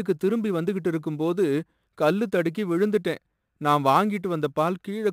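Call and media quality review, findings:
Sample clock jitter, whole clip. Fine hiss and roughness riding on the speech, strongest on loud, bright syllables. Gone in pauses. Probable component: ADC/DAC clock. Unstable timing, around 10 µs, misplaces samples. Error scales with waveform slope. Noise about 30 dB below signal.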